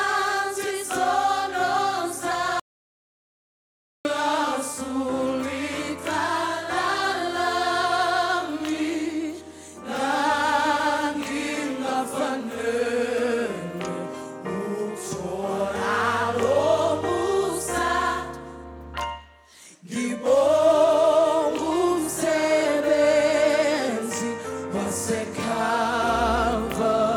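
From 2.60 to 4.05 s an audio dropout to silence, likely from a lost input, leaves a flat-line waveform and a blank spectrogram with no room tone.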